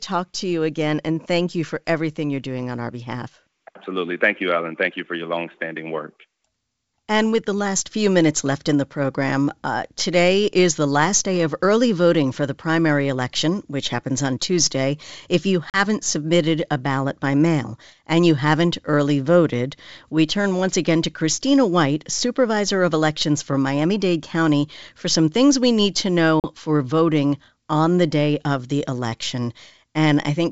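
Speech on a G.722 wideband call has two instances of packet loss on an ADPCM call. The first is a hard-edged silent gap at 15.70–15.81 s, just before "submitted a ballot by". The second is at 26.40–26.44 s, between "things we need to" and "for voting on the". Each drops 40 ms of audio, which fits a couple of lost packets. The decoder's adaptive predictor and step size then lag the sender's, so the sound resumes slightly distorted before settling.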